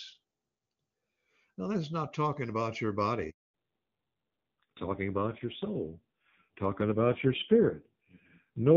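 Speech, carried at first over HD Voice with clean wideband quality consistent with AMR-WB at its top 23.85 kbit/s mode. At 3.30 s a handover gap cuts the sound: the voice fades within a few tens of milliseconds and stays silent for 240 ms, until 3.54 s, while the call switches networks and no speech frames arrive. On the waveform this shows as a flat line, and on the spectrogram as a blank vertical band across all frequencies. From 3.54 s to the end comes a fallback to narrowband. The call leaves the wideband codec for an older narrowband one, and the rougher, duller character fits AMR-NB's low 5.9 kbit/s mode. On the spectrogram, all energy above 4 kHz stops abruptly, leaving a hard horizontal ceiling.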